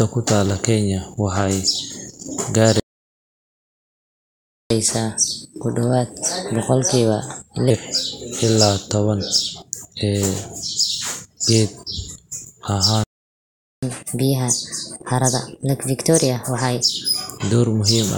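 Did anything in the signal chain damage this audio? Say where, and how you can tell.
Yes. The speech cuts out in mid-flow into dead silence twice, from 2.80 to 4.70 s (about 1.9 s) and from 13.04 to 13.83 s (about 0.79 s), then resumes. These are playback stalls at the driver or buffer stage. The likely cause is the player's output buffer running dry, or its audio thread being blocked, so nothing reached the converter until the feed recovered.

Right after each gap the speech comes back hurried and raised in pitch. From 4.70 to 7.70 s it runs at 1.15 times normal speed, about two semitones high. From 13.83 to 16.83 s it runs at 1.25 times, about four semitones high, before both settle back. This is catch-up at higher speed: the playback stage resamples its backlog to recover the lost time, so tempo and pitch rise together.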